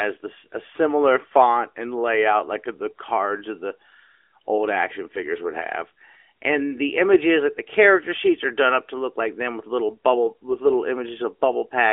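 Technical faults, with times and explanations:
No faults found; the speech sits in a 300 to 3400 Hz telephone band with nothing above 3.5 kHz, as expected of an AMR-NB mobile link, and its light coding texture fits the codec's top 12.2 kbps mode.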